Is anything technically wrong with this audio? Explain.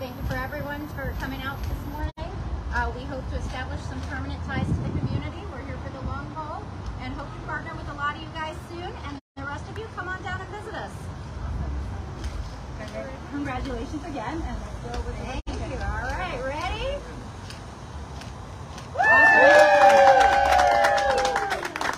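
Yes. From 0 to 2.0 s there's a switching supply whistle, a faint high tone drifting between 12.3 and 12.7 kHz, roughly 30 dB down, from a switching power supply.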